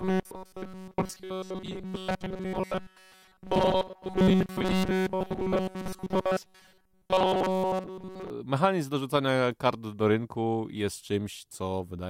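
Robotic sound from repeated short buffers runs from 0.01 to 8.30 s: the speech becomes a rigid, metallic buzz fixed at 188 Hz, loosely following the words. The likely cause is audio arriving too seldom, with a roughly 5.3 ms buffer looped most of the time instead of fresh audio.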